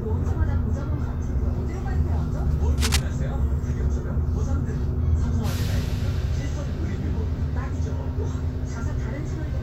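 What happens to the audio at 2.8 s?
Cable scratch noise runs from 2.78 s to 3.03 s, about a quarter of a second of dense, uneven crackling and rustling laid over the sound. It sits only slightly beneath the sound, roughly 5 dB down, so it is clearly audible rather than buried. The likely cause is a worn cable, connector or control being moved, so that its contact resistance jumps about rapidly and injects irregular bursts of noise into the signal until the contact settles.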